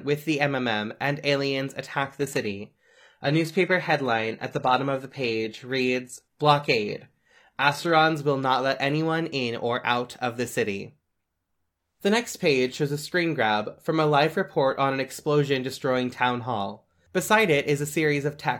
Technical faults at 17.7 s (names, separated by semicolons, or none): none